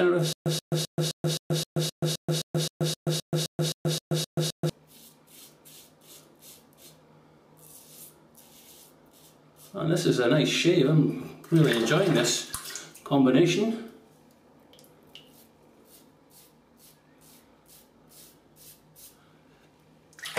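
A stutter with silent gaps runs from 0.33 s to 4.70 s of this audio. The same 130 ms burst plays, then about 131 ms of dead digital silence follows, and the pair repeats 16 times at an even 261 ms spacing. This pattern is likely a playback or stream stall, where each retry replays the last buffered fragment and then runs empty. Whatever audio belonged in those four-odd seconds never plays and is lost.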